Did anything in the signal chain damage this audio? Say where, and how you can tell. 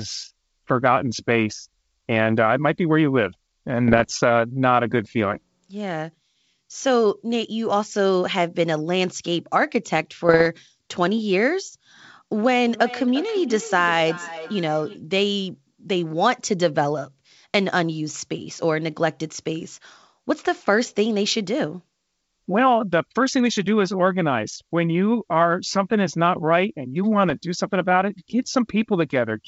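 Yes. Network stage: bit errors on an ADPCM link cause pops and rough bursts at 3.88–4.11, 10.27–10.47 and 27.30–27.34 s. Each flipped bit disturbs the decoder's step size and predictor, so the damage rings on briefly.

Call processing: feedback echo between two devices runs from 12.45 to 15.02 s. The speech returns roughly every 0.4 s, about 15 dB below it, because the echo canceller cannot remove another device's playback.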